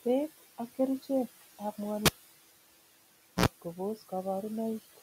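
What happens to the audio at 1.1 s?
At 1.1 s, as throughout the clip, noise suppressor artifacts are present: the room noise, sitting about 18 dB below the speech, is cut by about 15 dB between phrases and rises under them.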